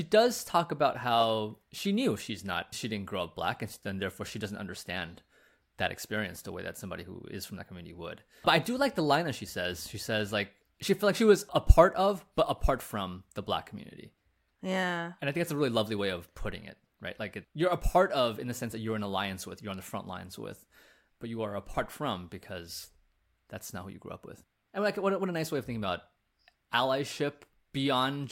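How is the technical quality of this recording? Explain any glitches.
The recording has one persistent fault. From 0.14 s to 28.30 s there are clock slip clicks, faint ticks about ten times a second. They are likely caused by two unsynchronised clocks differing by around 200 ppm, dropping or repeating single samples.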